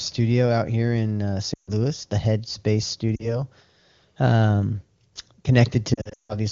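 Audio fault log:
1.54–1.71 s, 3.16–3.36 s, 5.94–6.36 s, lost AMR speech frames: the wideband decoder discarded corrupted frames and repeated the last good pitch and spectral shape at falling gain. After "out here in uh", sound drops to near silence within two frames of a 140 ms loss. A brief 40 ms dip follows, then repeated dropouts near the end, the longest 160 ms.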